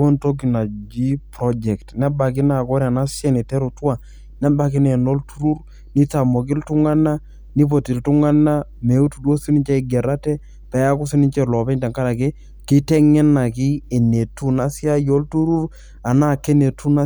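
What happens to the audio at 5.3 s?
At 5.3 s the speech sits over a steady low drone, a 50 Hz tone with a few low harmonics above it, roughly 25 dB below the speech level. It runs unchanged through this moment and across the whole clip rather than starting or stopping here. This is mains hum: a ground loop or a nearby transformer lets the 50 Hz power line leak into the signal path, adding a constant tone beneath the speech.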